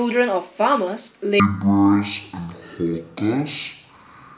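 Wrong sample rate from 1.40 s to the end of the clip: from this point the samples are played back at half the rate they were captured at, with no conversion between the two. Speed and pitch fall together, so the speech runs at 0.5 times its proper speed and sits a full octave, 12 semitones, lower, turning slow and deep. The exact halving fits 16 kHz material being clocked out at 8 kHz.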